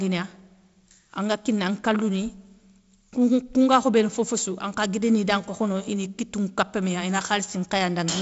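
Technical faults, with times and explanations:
Nothing stood out on listening to this speech recording, which comes through G.722 wideband telephone coding with its band limit near 7.7 kHz.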